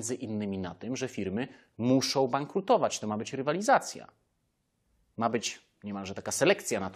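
No faults are audible anywhere in this recording.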